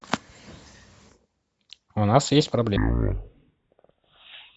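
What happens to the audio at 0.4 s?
Nothing goes wrong at 0.4 s; the speech there comes through intact, with no dropout, click, distortion or other fault.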